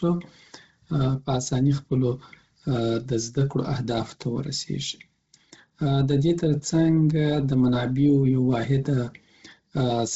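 Throughout, the speech sounds breathy and grainy with nothing above 7.8 kHz, likely Bluetooth LC3 compression at a low bitrate, around 16 kbps; the spectrogram shows a hard ceiling and noisy upper-band fill.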